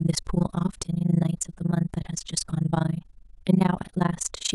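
Throughout the speech, overlap-add ripple gives a rough flutter at around 30 Hz: windowed frames were rejoined with overlaps that don't sum evenly, so the level dips by about 60 dB once per frame. Unlike dropouts, the dips repeat with clockwork regularity.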